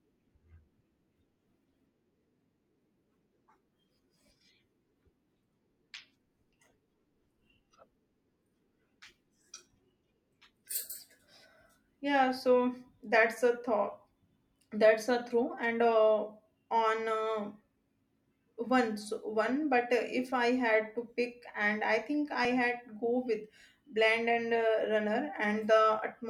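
Jumps at 9.06, 10.67, 11.95 and 22.45 s (after "and I think I") skip about 10 ms, likely dropped buffers (overrun), showing as waveform steps and vertical spectrogram lines.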